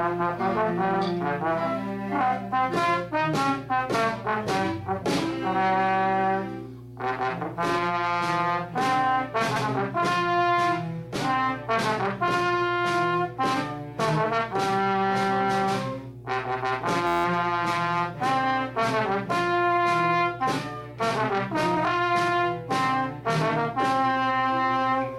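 A steady mains hum at 60 Hz sits under the whole audio, roughly 15 dB below the signal, pointing to a ground loop or nearby transformer rather than a hum at 120 Hz. Repeated frames cause brief stutters at 0.93 s, where about 52 ms plays twice, and at 9.55 s, where about 105 ms repeats; each is a single replay of a short run of compressed frames, not a sustained loop. At 17.07 to 17.25 s a system hang loop replays one 11.61 ms slice 15 times, fitting a 512-sample buffer. That produces an 86 Hz buzz rather than a one-off stutter.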